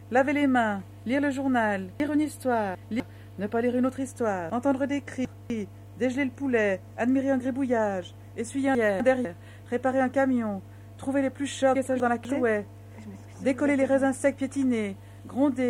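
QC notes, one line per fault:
2.0–3.0 s and 4.5–5.5 s, chunks out of order: in each span a 250 ms chunk was delivered three chunks late, so it plays after the three that should follow it. Nothing is missing, but the sound jumps backward and forward, with three hard joins within that second.
8.75–9.25 s and 11.75–12.25 s, chunks out of order: in each span a 250 ms chunk arrived one chunk late, swapping two neighbouring chunks. The half-second sounds briefly jumbled, with three abrupt joins at the chunk boundaries.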